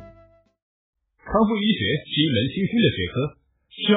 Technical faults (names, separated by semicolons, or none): adaptive stream at a lower bitrate